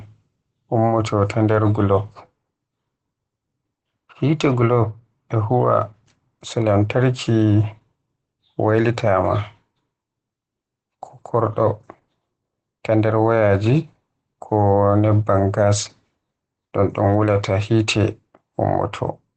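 Throughout, the speech has been through Opus voice compression running its SILK linear-prediction coder at what sounds like a low bitrate, about 12 kbps, in wideband mode. The encoder models the voice as a predicted filter driven by a coarsely coded excitation and drops the upper band, so nothing is left above roughly 8.8 kHz. The result is plainly audible: speech sounds muffled and dull, with a hoarse, slightly robotic edge.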